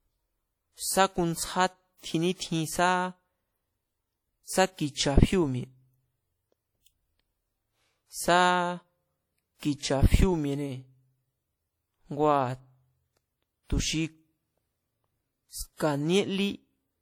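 Speech, and across the whole clip you get two layers of codec grit stacked on each other, with the first codec's artefacts plus a second set of artefacts on top. That's likely transcoding between lossy codecs, roughly an MP3 around 64 kbit/s re-encoded to WMA around 48 kbit/s, with the band topping out near 20.1 kHz.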